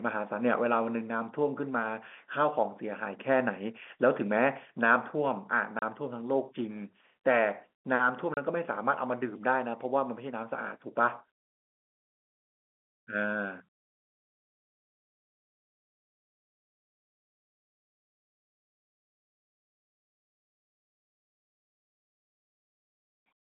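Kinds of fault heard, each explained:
Packet loss filled with silence: at 5.79 s and again at 8.34 s the speech drops out for 30 ms, one lost packet's worth each time, and the receiver plays plain silence in its place, so the gaps start and end abruptly.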